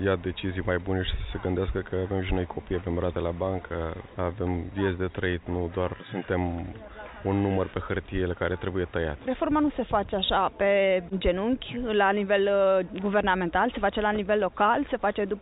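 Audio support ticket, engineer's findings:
No faults found; the audio carries the expected call-codec path with nothing above 4 kHz, which fits a narrowband G.711-type connection.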